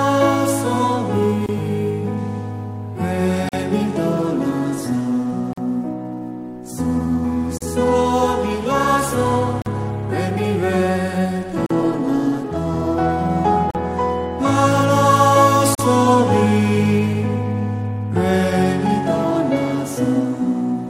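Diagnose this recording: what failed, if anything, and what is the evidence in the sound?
Gap at a join of encoded pieces at 1.46, 3.49, 5.53, 7.58, 9.62, 11.66, 13.71 and 15.75 s. This is a codec-stage fault: the sound stops for 27 ms at the first join and 43 ms at each later one, with smeared edges, then resumes where it left off. The two-second spacing points to separately encoded segments joined without trimming each run's start-up delay and final-frame padding.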